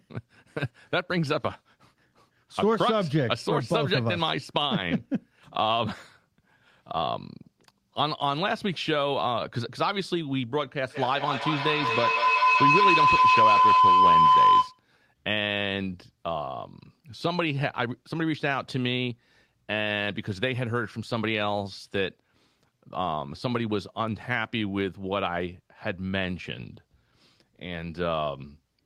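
From 10.85 to 14.85 s, a feedback howl: the loudspeaker-to-microphone loop gains level each pass, drawing a bright spectrogram line near 1 kHz that pulses about five times a second and peaks about 8 dB above the speech.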